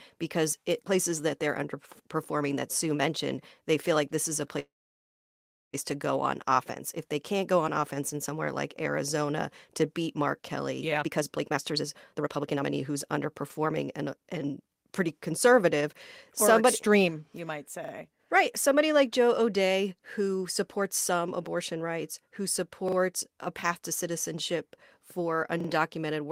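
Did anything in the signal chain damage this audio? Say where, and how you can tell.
Yes. From 4.59 to 5.75 s the sound stalls, carries on briefly, then goes silent for about a second before resuming intact. This is a call audio freeze, likely from delayed network packets draining the jitter buffer.

From 10.94 to 14.84 s the speech hurries at unchanged pitch, running about 128% speed. This is a jitter buffer speed-up: the receiver trimmed roughly a second of pitch periods to cut excess delay.

At 17.85, 22.88 and 25.61 s a short stutter is heard: one 40 ms piece plays three times with hard joins. This repeated buffer is a driver or buffer underrun replaying stale audio, which fits a 40 ms buffer.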